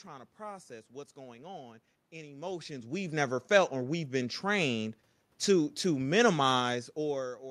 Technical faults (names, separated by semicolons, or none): none